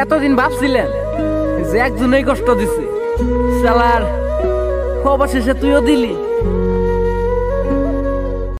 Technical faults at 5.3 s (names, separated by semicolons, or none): none